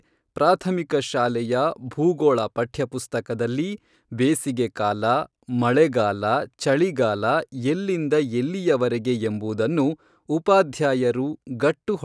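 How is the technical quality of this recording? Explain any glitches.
No glitches turn up anywhere in this recording, so there's nothing here to explain or pick apart.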